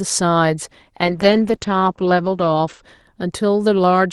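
A call bitrate drop from 1.06 to 2.89 s starves the encoder, fitting about 11 kbps; speech turns coarse and watery, cut above 8 kHz.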